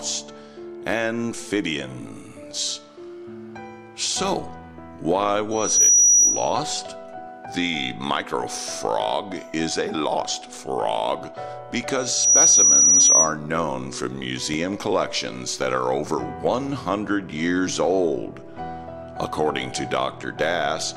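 Two bursts of loudspeaker feedback squeal hit this audio, at 5.51 to 6.60 s and again at 11.97 to 13.34 s. Both times a single 5.8 kHz tone swells up over about a third of a second and then sits roughly 10 dB above everything else. That's the mic hearing its own speaker, with the loop gain tipping past unity at that one frequency, so it feeds on itself until the loop gets broken.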